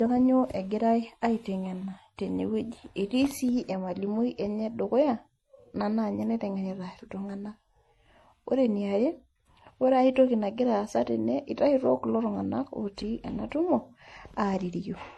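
From start to finish, the speech has nothing above 12 kHz and carries two different kinds of coding artefacts heard together. That mix likely comes from transcoding between lossy codecs, an MP3 at around 48 kbit/s later re-encoded as HE-AAC at around 40 kbit/s, with the second encoder spending bits on the first one's artefacts instead of on the speech itself.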